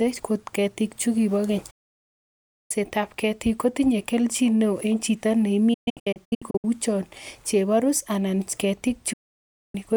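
A digital broadcast dropout mutes the speech after "chukibo keny" from 1.70 to 2.71 s, resuming at "ab ketik". It recurs from 5.74 to 6.65 s as scattered holes up to 128 ms long, and again from 9.13 to 9.75 s. Each time the receiver stopped getting good frames and went quiet, so the sound cuts off in an 8 ms fade and returns later. The waveform drops to flat silence, and the spectrogram shows blank vertical bands, with the middle one broken into short gaps.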